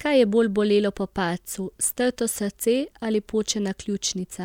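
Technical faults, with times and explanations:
0.12–4.43 s, clock slip clicks: faint ticks recur about every 0.05 s, around a hundred in all, forming a soft rattle under the speech. This is likely two unsynchronised clocks roughly 500 ppm apart, with each slip dropping or repeating one sample. Their strictly even spacing sets them apart from irregular dropout clicks.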